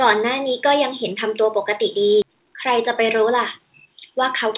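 A short speech recording has two faults from about its midpoint on. At 2.22 to 2.24 s there is a skip ahead. Roughly 0.7 s of speech is simply gone, and nothing fills the hole. The sound on either side is butted together, so the talker seems to jump forward. This happens when a stretch of audio is lost in transit or thrown out of an overfull jitter buffer while newer audio is already queued. From 2.32 to 4.46 s a jitter buffer speed-up follows. Speech runs at about 106% of normal pace, but the pitch stays put. The receiver is trimming tiny pitch-period-sized slices, over and over, to shed roughly 150 ms of excess delay. The result sounds slightly rushed. Throughout, the call path's band limit is audible, with nothing above 4 kHz, which fits G.711 A-law at 64 kbps.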